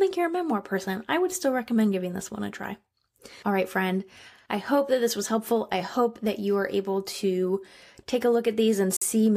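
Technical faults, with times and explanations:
8.97–9.02 s, Bluetooth stall: the speech cuts to about 50 ms of silence and then resumes. The likely cause is wireless interference delaying packets, so the headphones' buffer ran empty and playback paused until resent audio arrived.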